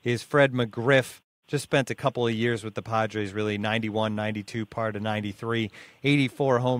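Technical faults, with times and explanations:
No technical faults are heard in this speech clip.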